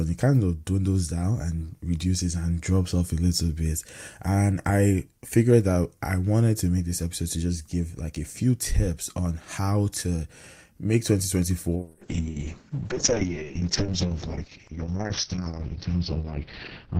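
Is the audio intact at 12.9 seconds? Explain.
No, 12.9 s falls inside a call bitrate drop that starts at 11.78 s and runs to the end. The call's bandwidth estimate collapsed, so the encoder starts coding the speech far more coarsely, which fits a fall from around 64 kbps to 6 kbps. It also chops the top end, from 20 kHz down to 4 kHz, so the sound turns muffled, rough and watery. It never recovers before the clip ends.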